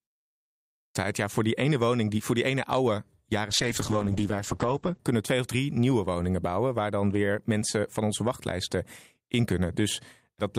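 A speech recording whose first phrase bursts abruptly out of silence at 0.35 s, its opening sounds missing until about 0.95 s. That is a clipped start after a pause: after 0.35 s of silence, the output device had gone to sleep and needed time to wake and lock again. Roughly 0.6 s of sound was swallowed before playback resumed. Later, from 3.51 s to 5.09 s, the voice turns rough, watery and muffled, with the bright top end gone. This is a call bitrate drop. The bandwidth estimate fell, so the encoder went from 64 kbps down to 10 kbps and stayed at its lowest for about 1.5 s. At that rate Opus codes far more coarsely and narrows the audio band from 20 kHz to 8 kHz, which explains the dull, smeared quality until the bitrate recovers.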